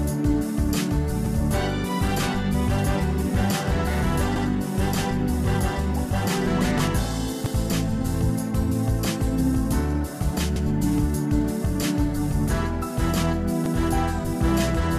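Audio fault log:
1.26 to 13.76 s, overlapping chunks: every 3 s, at 1.26, 4.36, 7.46, 10.56 and 13.66 s, a 100 ms slice plays twice where chunks overlap, so you hear a regular stutter.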